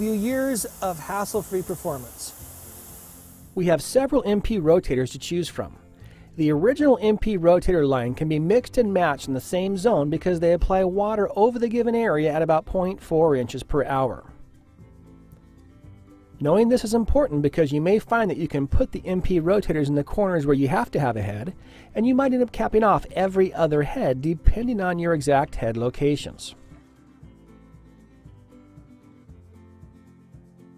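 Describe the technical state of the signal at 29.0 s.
Around 29.0 s the signal is intact, with no dropouts, clipping, distortion or other technical fault to be heard there.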